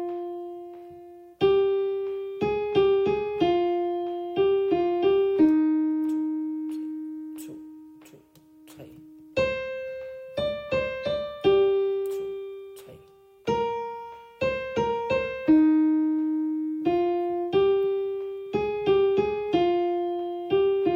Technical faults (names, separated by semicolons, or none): none